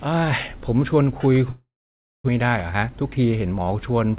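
Speech whose sound turns into a fading buzz or hiss at 1.5 s, then goes silent until 2.3 s and resumes with a piece missing, likely a long network dropout. From 2.42 s to 3.76 s the speech runs hurried at about 110% speed with unchanged pitch, a jitter buffer speed-up trimming roughly 150 ms to recover the delay. Nothing above 4 kHz is heard, which fits a narrowband call codec such as G.711.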